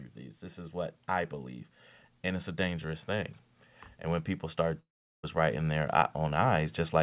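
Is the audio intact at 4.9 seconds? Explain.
No. Right after "when people", from 4.56 s to the end at 7.03 s, there's automatic gain rising: the gain control decided the input was too quiet and kept nudging it up, so the sound and background noise swell together gradually over those couple of seconds.

On top of that, from 4.8 to 5.25 s, about 0.44 s of audio is simply gone. What you hear is the last sound stretched into a fading buzz, then near-silence, and it resumes further on with that chunk skipped. That's likely a long network dropout.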